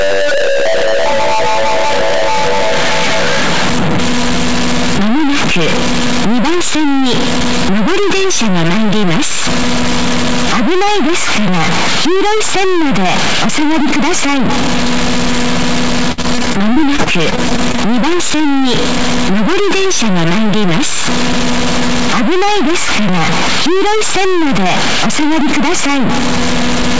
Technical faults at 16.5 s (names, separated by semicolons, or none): stuck bit; repeated packet loss (robotic sound)